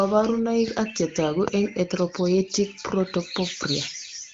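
Nothing stood out on listening to this speech recording.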